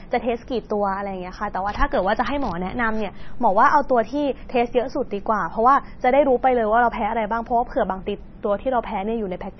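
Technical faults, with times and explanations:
Throughout, MP3 compression: the speech sounds heavily watery and swirly, with nothing above 5.9 kHz, likely from an encoder starved of bits, which fits about 24 kbps. It cuts the treble and flickers weak frequency lines on and off between frames, smearing attacks.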